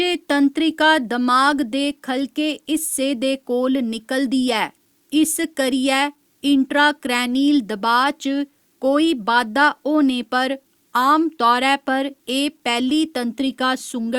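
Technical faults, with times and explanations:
Throughout, low bit depth without dither: quiet speech turns gritty, likely from 10-bit truncation; the spectrogram shows signal-following noise roughly 45 dB down, and the waveform shows stepped quiet tails.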